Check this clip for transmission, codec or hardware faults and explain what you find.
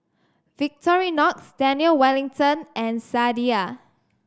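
Nothing stood out on listening to this speech recording.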